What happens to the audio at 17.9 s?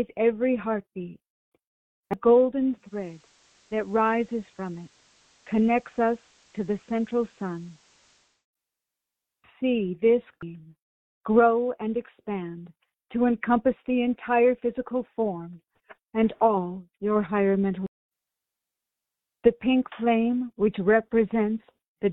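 At 17.86 s there is a CD skip: a jolt or disc flaw knocks the laser onto another turn of the spiral, so the sound mutes very briefly with a tick and resumes from a different point, unlike a dropout, where playback continues from the same place.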